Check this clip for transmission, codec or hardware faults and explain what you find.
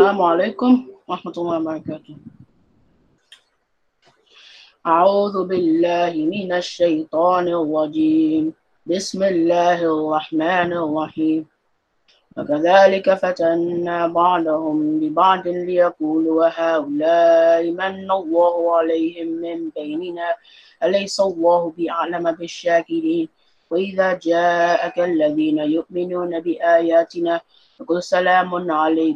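No transmission, codec or hardware faults.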